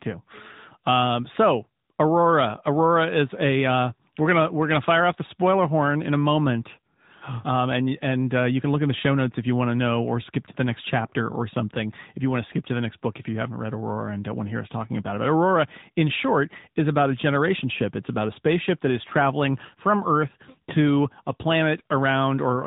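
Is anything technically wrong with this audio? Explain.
Yes. The speech passes through an AMR narrowband mobile codec. Throughout, nothing above 3.8 kHz survives, leaving a flat spectrogram ceiling. Frame-by-frame vocal-tract modelling, at what sounds like a mid rate near 10 kbps, makes the voice plainly buzzy and synthetic.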